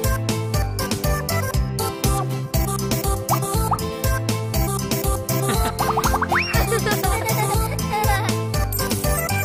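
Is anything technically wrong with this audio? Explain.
No, nothing technically wrong can be heard here.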